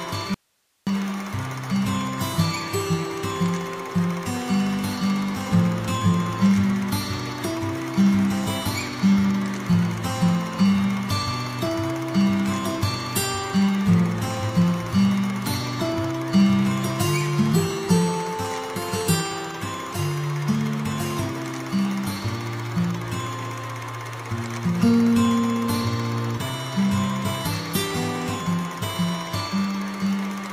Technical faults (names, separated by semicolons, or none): audio dropout to a faint residue